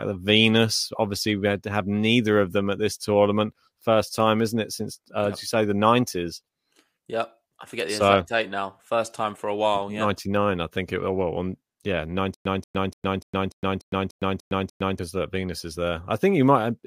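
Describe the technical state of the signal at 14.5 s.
At 14.5 s the signal sits inside a stutter with silent gaps running from 12.34 to 14.99 s. The playback or stream most likely stalled, and on each retry it replayed its last buffered fragment before running dry. What you hear is the same 183 ms burst of speech returning nine times, each followed by about 111 ms of digital silence, giving an even 294 ms pulse. The speech that belonged in that span never plays.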